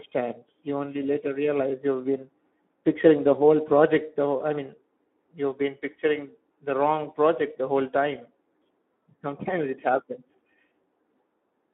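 From start to finish the speech carries Speex codec damage. It sits inside a narrow line band, about 200 Hz to 3.5 kHz, and the sound is hoarse and noisy, which fits a low setting of around 11 kbps. The code-excited coder has too few bits to model the excitation, so the voicing turns rough and noisy. A plain band-limit would sound thin but clean. Transform codecs leave swirling, watery tones. This roughness sits in the voice itself.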